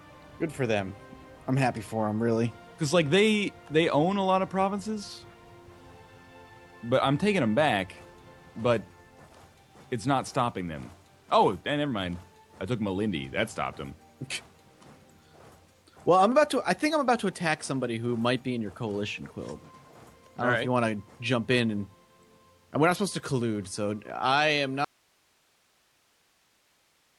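At 24.85 s the audio drops out abruptly and stays gone to the end, leaving only hiss roughly 40 dB below the signal, an audio dropout to a faint residue. The likely cause is a lost feed with a live path after it. On a waveform it appears as a sudden collapse to a thin noise band, and on a spectrogram as a sharp edge into faint, even hiss.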